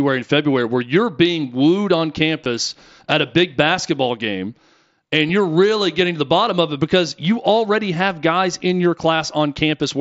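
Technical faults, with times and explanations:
2.44 s and 5.28 s, concealed Bluetooth headset packet loss: packets between the headset and the phone went missing for about 15 ms and 7.5 ms, the first fitting two lost 7.5 ms packets and the second one. The receiver filled each hole by repeating the best-matching stretch of the preceding waveform, so there is no silent gap or click as with a plain dropout, and the single loss at 5.28 s is nearly hidden.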